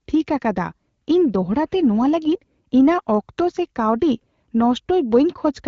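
No technical faults can be heard anywhere in the speech. It passes through the AMR wideband (HD Voice) codec at 12.65 kbit/s, which leaves only light coding traces and no content above about 7.5 kHz.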